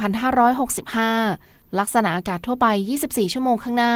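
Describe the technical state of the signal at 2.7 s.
At 2.7 s the signal is intact, with the speech carried through Opus voice compression working normally at around 20 kbps in hybrid mode.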